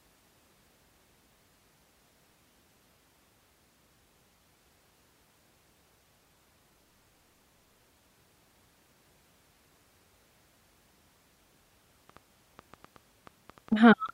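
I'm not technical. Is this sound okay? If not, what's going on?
No. From 12.10 to 14.10 s there is a train of clicks: about ten uneven pops, roughly 5.5 per second, likely from interference by nearby equipment.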